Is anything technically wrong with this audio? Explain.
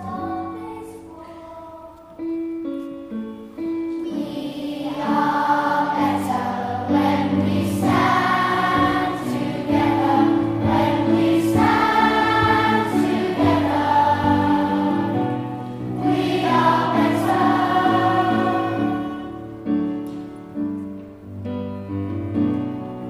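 No, nothing in this audio points to a technical fault: the signal holds steady throughout with no events that stand out from the material itself.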